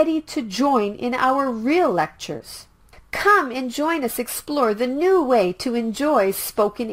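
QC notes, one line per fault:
2.37–2.41 s, short concealed packet loss: about 20 ms of the stream missed the decoder's deadline, so the receiver extended the preceding sound for 21 ms and blended back into the real signal. This leaves a brief smear or wobble where the gap was patched.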